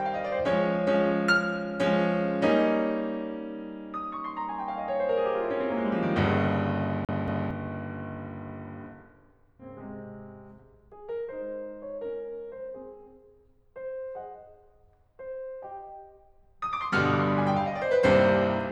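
From 7.05 to 7.51 s the music catches like a CD stuck on one turn: a 0.23 s fragment plays twice, with a brief mute at each jump, as if the laser were thrown back one track. On a waveform the identical block repeats, with tiny gaps between copies.

At 9.59 to 9.65 s the music lurches forward with a small blip, likely a stream segment skipped, so the player resumed from the next chunk. A spectrogram shows an abrupt vertical seam where the harmonic patterns fail to continue.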